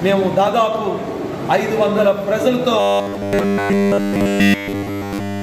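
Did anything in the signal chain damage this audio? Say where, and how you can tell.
Yes: from 2.80 s to the end, the sound becomes a rigid metallic buzz at 100 Hz, robotic sound from repeated short buffers, likely a starved driver buffer looping 10 ms blocks.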